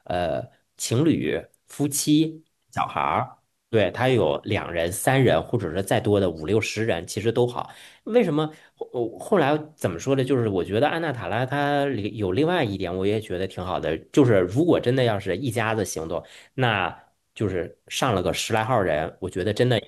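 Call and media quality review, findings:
No audible faults found in this speech recording; nothing to flag for any component.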